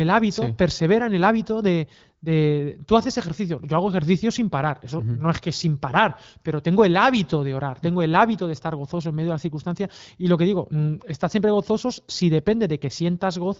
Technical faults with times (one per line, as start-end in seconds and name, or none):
none